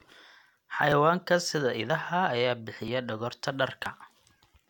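Audio missing between chunks, likely 1 s chunks, drops roughly 20 ms of speech at 0.92, 1.90, 2.88 and 3.86 s, leaving regular skips.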